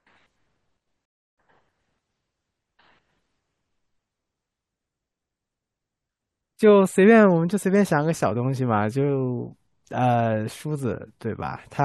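A speech clip with a rebuffering stall near the start: at 1.05 s the sound drops abruptly to silence, holds there until 1.38 s, and then picks up at exactly the point where it broke off, with nothing skipped. The player ran dry of downloaded audio and simply waited for more data to arrive before continuing, so the only damage is a gap of about 322 ms inserted into the timeline.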